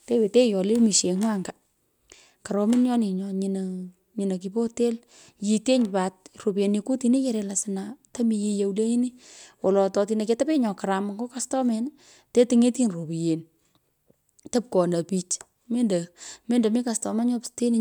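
No technical faults can be heard anywhere in this recording of speech.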